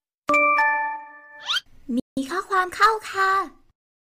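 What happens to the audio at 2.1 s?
A playback stall runs from 2.00 to 2.17 s, so 2.1 s falls inside it. The sound cuts off abruptly mid-flow, and the output holds dead silence for about 170 ms before the audio picks up again. That kind of gap likely comes from the player running out of buffered data, or from its playback thread being blocked, leaving nothing to send to the output until it recovered and resumed feeding samples.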